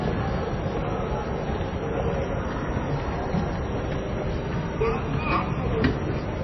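From start to finish there's nothing above 5.8 kHz, plus a watery, swirly smear, likely MP3 compression squeezed down to roughly 23 kbps.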